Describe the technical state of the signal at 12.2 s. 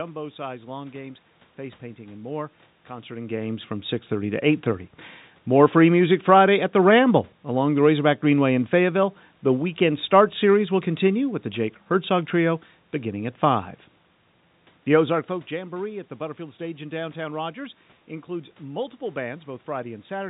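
At 12.2 s the signal is intact, with no dropout, distortion or other fault.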